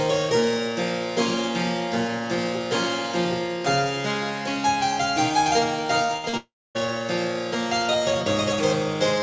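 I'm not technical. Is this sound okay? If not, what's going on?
No, there's a rough patch between about 6.06 and 6.77 seconds, where the connection stumbled several times in a row.

At 6.06 and again around 6.29 s you'll hear short concealed packet loss: a few hundredths of a second went missing, and the receiver papered over each gap with a quick smear or wobble.

From 6.17 to 6.25 s there's a burst of packet loss. About 60 ms vanished, covered by a brief held buzz or hiss that fades before the sound picks up further along.

Then from 6.37 to 6.77 s comes what's most likely a long network dropout. A fading fill gives way to near-silence, and roughly 0.4 s of the original sound is simply gone.

The call audio also stops at 8 kHz, so it sounds a touch dull up top.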